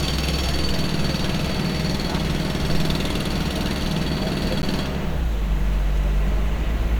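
At 4.62 s the sound drops to silence for about 12 ms, then resumes. This is a Bluetooth stall. Radio interference likely delayed packets, so the headphone buffer emptied and playback paused. It is heard as a tiny gap in the sound.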